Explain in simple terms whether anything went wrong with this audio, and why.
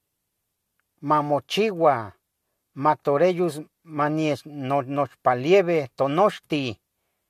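Nothing went wrong with this recording. The speech comes through without any dropouts, clicks, glitches or distortion at any point.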